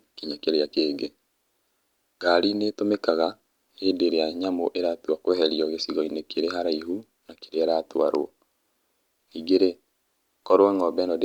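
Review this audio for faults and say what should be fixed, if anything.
No faults; nothing needs fixing.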